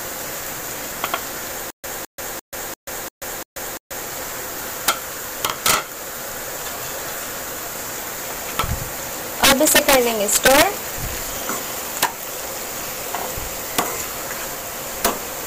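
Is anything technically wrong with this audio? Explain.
Yes, there are two faults. From 1.70 to 4.00 s there is a stutter with silent gaps. A 210 ms fragment repeats six times, each followed by about 134 ms of digital silence, on an even 345 ms cycle. The likely cause is a stalled player or stream replaying its last buffer on each retry. The audio from that stretch is lost.

There is also integer overflow, heard at 4.88 s, 5.45 to 5.74 s, 8.59 s, 9.44 to 9.95 s, 10.33 to 10.63 s, 11.97 to 12.05 s, 13.78 s and 15.05 s. Peaks driven about 3 to 11 dB past full scale wrap to the opposite sign instead of limiting. This produces violent cracks, much harsher than clipping.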